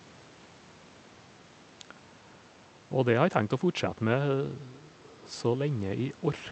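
No technical faults can be heard in this speech recording. The call path limits the sound to about 8 kHz, which fits an Opus call codec at around 48 kbps, and faint room noise sits about 29 dB below the speech.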